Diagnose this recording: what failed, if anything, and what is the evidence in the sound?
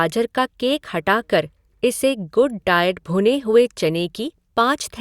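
Nothing failed in this recording.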